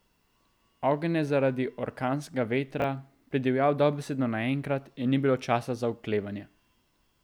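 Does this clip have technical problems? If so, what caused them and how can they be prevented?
Yes. Between 2.80 and 2.84 s the clip has chunks out of order: one 20 ms block of audio was delivered or written a single chunk late, so it plays after the block that should have followed it. No audio is missing, but the swapped pair creates three abrupt joins, heard as a brief jumbled blip in the speech. Using sequence numbers and a reordering jitter buffer before playback or writing would prevent this.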